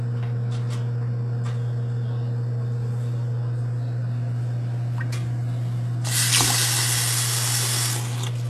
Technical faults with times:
0.00-8.49 HE-AAC compression

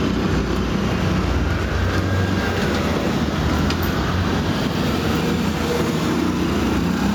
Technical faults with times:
0.00-7.15 gain pumping

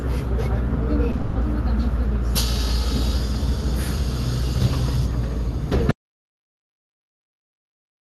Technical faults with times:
1.11-1.21 short concealed packet loss
1.21-1.37 burst of packet loss
5.91-8.02 audio dropout to silence

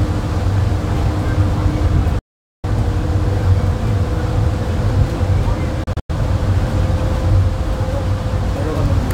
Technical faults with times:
2.19-2.64 digital broadcast dropout
5.84-6.10 digital broadcast dropout

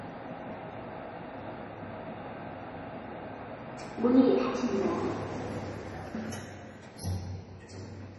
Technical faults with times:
0.00-8.18 MP3 compression

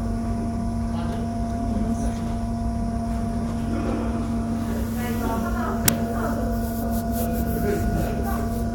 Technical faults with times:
5.88 uninitialised buffer

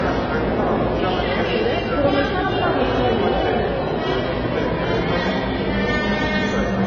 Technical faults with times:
0.00-6.86 low-bitrate audio saved at a high bitrate

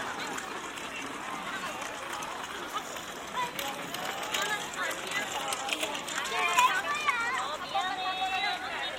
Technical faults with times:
none

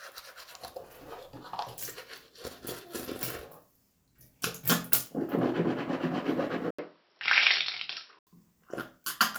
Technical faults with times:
6.71-8.27 input switched to a poorer device

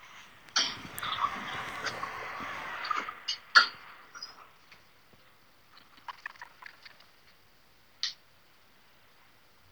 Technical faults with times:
5.76-7.22 buffer tearing

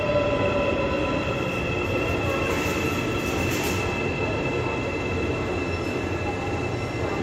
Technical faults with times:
none

